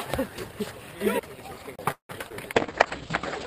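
At 1.76 s a tick and a brief mute of roughly 30 ms come before the sound jumps to another point: a CD skip, where the laser leapt to a different turn of the disc's spiral.

From 1.92 to 2.11 s the sound stalls, trailing off into about 120 ms of silence before resuming where it stopped, 174 ms late. This is a call audio freeze, likely from delayed packets draining the jitter buffer.

At 2.29 and 2.32 s two quick smears replace the sound. These are short concealed packet losses: about 20 ms went missing each time, and the receiver papered over the gaps by extending the preceding sound.

From 2.55 s to the end the audio turns rough and muffled, with its top cut from 20 kHz to 8 kHz. This call bitrate drop fits the encoder falling from around 32 to 10 kbps.

From 2.67 to 2.99 s the sound drags slightly, at 91% speed with the pitch unchanged. This is a jitter buffer slow-down, repeating short stretches to add 36 ms of reserve.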